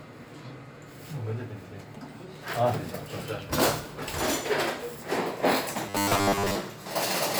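From 5.86 to 6.55 s the audio takes on robotic sound from repeated short buffers: a hard, metallic buzz locked at 100 Hz that still loosely tracks the everyday sound underneath. The likely cause is audio arriving too rarely, with the playback side filling gaps by looping roughly the last 10 ms. Most of that stretch is repeated material rather than fresh audio, so real content is skipped and the fixed loop period imposes its own pitch.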